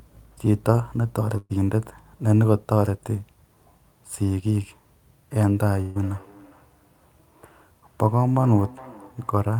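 At 1.37 to 1.51 s, a burst of packet loss: about 120 ms of audio never arrived, so the receiver stretched the last sound and faded it out, briefly fell silent, then resumed later. From 5.71 s to the end, feedback echo between two devices: another device's loudspeaker fed this microphone, so speech returns roughly every 400 ms, thin and ringing, about 23 dB below the direct voice. At 5.81 to 5.97 s, a second burst of packet loss dropped about 140 ms, concealed as a held, fading sound with no silence before speech resumed.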